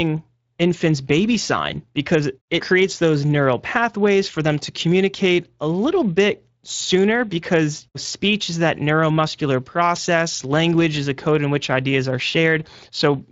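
Throughout the speech, Speex codec damage is plainly audible: a hoarse, noisy quality to the voice, consistent with a roughly 20 kbps CELP setting, not the swirling warble of transform codecs.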